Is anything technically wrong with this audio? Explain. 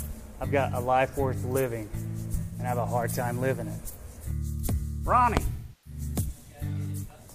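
Yes. There is AAC frame loss with concealment, twice. From 2.40 to 2.59 s, about 128 ms of audio is missing, which fits three lost frames. From 5.52 to 6.01 s, about 341 ms is gone, which fits eight frames. When frames are lost, the decoder rebuilds the gap from the last good spectrum rather than leaving silence. The short first gap is heard as a smeared, noisy or phasey patch where the sound loses its detail; the longer second one decays to a very faint noise floor and fades back in.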